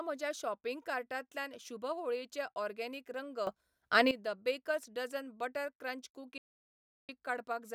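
A speech recording with two faults. At 3.47 s the level leaps up abruptly, speech and background noise together, by about 13 dB, and stays raised until 4.11 s, just before "द बेकर्स डझन बटर", where it drops back just as suddenly. That is a sudden gain jump. The step happens between one sample and the next, with no ramp, most likely because a gain setting or bit shift was applied instantly rather than faded in. Later, right after "बेकर्स डझन बटर क्रंच", the speech cuts off mid-flow at 6.38 s into silence, with no room tone at all, until 7.09 s, so about 0.71 s of material is simply missing. This is an audio dropout to silence, likely caused by the input being lost for a moment (a disconnected device, failed link or stray mute) while the recorder kept writing silence.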